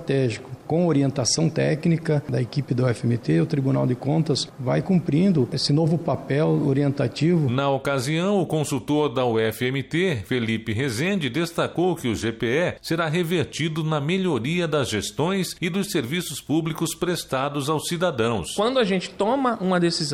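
No technical faults can be heard.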